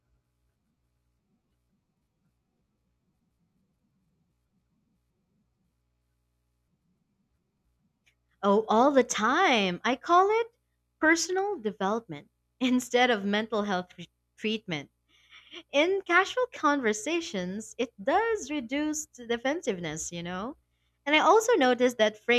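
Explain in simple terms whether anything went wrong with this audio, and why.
Nothing went wrong; no technical faults can be heard.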